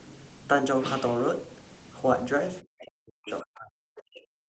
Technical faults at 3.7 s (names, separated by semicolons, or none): speech suppressed in double talk